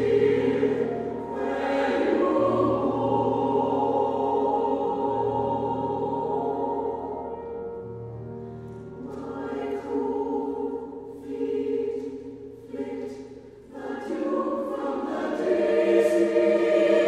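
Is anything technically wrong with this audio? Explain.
No, nothing technically wrong can be heard here.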